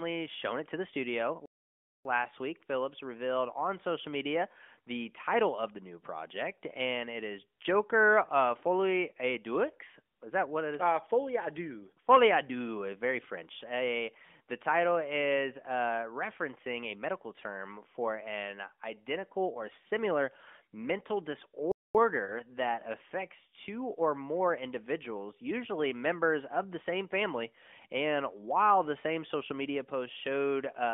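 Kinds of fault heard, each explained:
playback stall: The output goes silent in mid-flow and then carries on from where it stopped, most likely because the player ran short of data or its thread was blocked. At 1.46 s, right after "it to the studio", the sound halts for about 0.59 s. At 21.72 s, after "identical or similar mental", a shorter gap of about 0.23 s follows before the audio resumes with "that affects two or".
lost AMR speech frames: When a coded speech frame is discarded, the AMR decoder fills the gap by repeating its last good pitch and vocal-tract parameters at reduced gain. Here the speech passes through narrowband AMR, limited to roughly 200 Hz to 3.5 kHz. Around 22.24 to 22.33 s, just before "that affects two or", there is a brief dip or warble. This fits a single concealed 20 ms frame, and the voice recovers with a momentary roughness.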